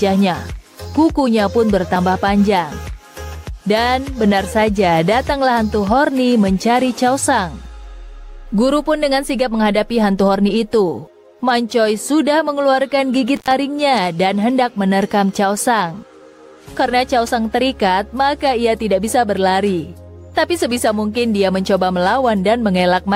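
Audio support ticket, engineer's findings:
Intermittent contact, 13.36 to 13.51 s. Audio drops out briefly, crackle at the break and make edges, faint hiss during the gap, line open about 77 ms within that span. Probable component: loose cable or plug in the signal path. Mechanism: conductor separates momentarily, signal lost, then contact re-seats with a burst of crackle. Reseat or replace connector, check cable strain relief.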